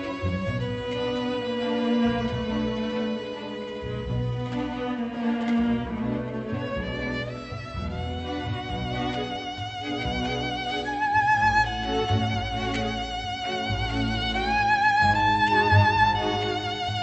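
No faults are audible; the audio carries the normal coding character of a call path, with its top end rolled off near 8 kHz.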